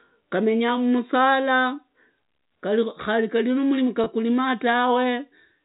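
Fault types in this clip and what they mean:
Packet loss with pitch repetition, 4.04 to 4.06 s: about 20 ms of audio went missing, which fits a single lost packet, and the receiver bridged it by repeating the last pitch period, heard as a brief held, slightly buzzy moment within the telephone-band speech.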